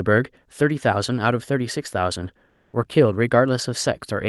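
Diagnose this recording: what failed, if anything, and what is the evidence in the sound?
Call processing most likely dropped into discontinuous transmission during a pause, so the receiver inserted comfort noise in place of the background from 2.49 to 2.73 s. For 240 ms the faint background becomes a steady, featureless hiss about 2 dB quieter.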